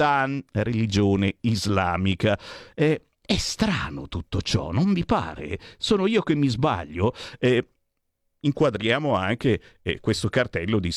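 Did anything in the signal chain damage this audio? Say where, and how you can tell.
No, nothing in the signal chain damaged this audio.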